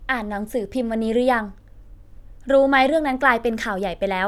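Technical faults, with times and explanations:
No technical faults are audible anywhere in the speech recording, and the signal stays intact and continuous at every point.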